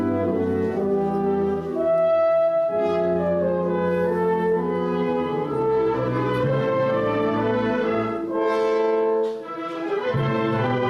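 No technical faults can be heard anywhere in this recording.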